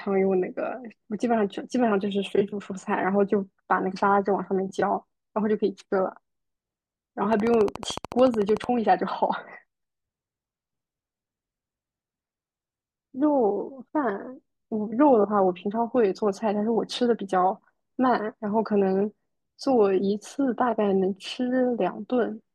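A train of clicks runs from 7.33 to 8.65 s: about twenty evenly spaced pops at 13.7 per second, well above the speech, likely from interference or a faulty connection.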